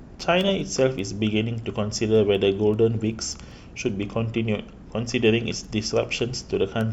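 A digital link is being read by a receiver running on its own clock rather than locked to the sender's, a clock mismatch on the order of 100 ppm, and this speech clip carries the resulting word clock ticks. From 0.22 s to 6.81 s the clocks slip past each other about every fifth of a second, and each slip is heard as a sharp tick of uneven strength. There are around forty in a steady rhythm, which fits a single sample being dropped or repeated at each slip.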